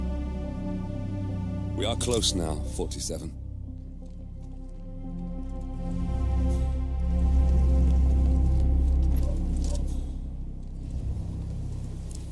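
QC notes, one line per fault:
No technical faults are audible; the signal holds steady level and continuity, with nothing intruding on the sound at any point.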